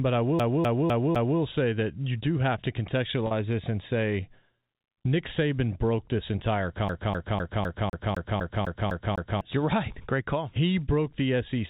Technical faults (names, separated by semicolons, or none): CD stuck on one turn; packet loss with pitch repetition